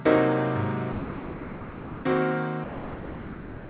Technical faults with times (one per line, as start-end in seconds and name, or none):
0.92-2.04 sound dropped by the voice detector
2.64-3.70 sound dropped by the voice detector